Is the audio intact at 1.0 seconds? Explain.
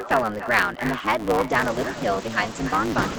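No. At 1.0 seconds the speech is affected by two faults that run through the whole clip.

The first is echo with no canceller. The far end plays the call through a loudspeaker, its microphone picks that playback up, and nothing subtracts it before it is sent back. Every syllable is trailed, roughly a third of a second later, by a copy about 12 dB quieter. The copy sounds thinner than the direct speech, so the words smear into their own delayed shadow.

The second is a truncated block size mismatch. One stage writes blocks longer than the next stage reads, which fits a 512-sample write, and the unread tail of each block is discarded. Those regular cuts produce a buzz at 109 Hz. Because audio is dropped in every block, the speech runs 1.16 times fast while keeping its timbre. Both faults sit on top of the call path's normal Opus coding, which limits the audio to an 8 kHz bandwidth.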